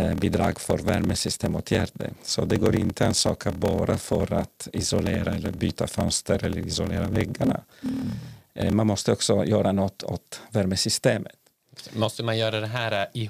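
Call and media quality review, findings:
Block size mismatch (padded), 0.0–8.75 s, ending before "måste också göra något". Buzz at about 38 Hz from zero-filled gaps each block. Speech runs slow, 0.889×, timbre kept. Fits 1024-sample writes into larger reads.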